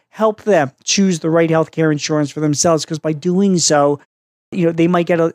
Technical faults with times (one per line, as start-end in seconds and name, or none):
4.30-4.52 clipped start after a pause